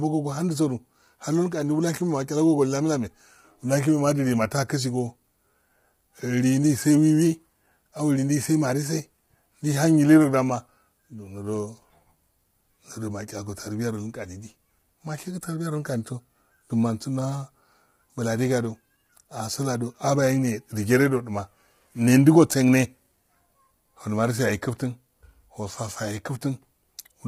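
From start to finish the speech has a rough, grainy texture, with noise filling the gaps between harmonics and a thin, synthetic-sounding top that stops at 16 kHz. That's likely low-delay AAC compression: the short frames blur pitch detail, and heavy damage like this fits about 24 kbps.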